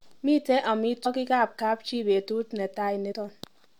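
At 1.05 s and 3.11–3.14 s, compressed frames are skipped. Roughly 150 ms, then 100 ms, of speech vanishes, each heard as a sudden jump ahead in the speech.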